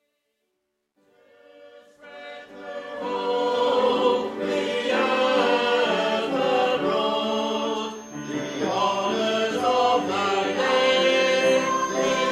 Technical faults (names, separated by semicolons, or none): truncation distortion on a fade; feedback whistle